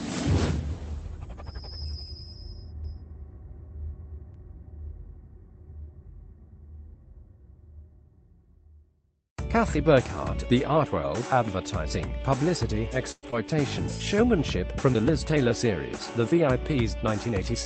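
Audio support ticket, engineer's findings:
Doubled audio track, 2.84–4.34 s: full-band copy roughly 300 ms behind, about 5 dB down, starting and stopping abruptly. Likely a second capture path or an edit holding two copies. No decay or room colour, so not acoustic echo.

Call audio freeze, 13.11–13.25 s: last sound stretched into a fading buzz or hiss, then about 40 ms of silence, 113 ms total. Likely jitter-buffer underrun from delayed packets. Audio resumes where it stopped with nothing missing, unlike packet loss.

Short concealed packet loss, 13.31–13.34 s: brief smear as concealment fills the hole and blends back. 40 ms of audio genuinely gone and timing pulled back roughly 30 ms, which distinguishes it from the freeze just before.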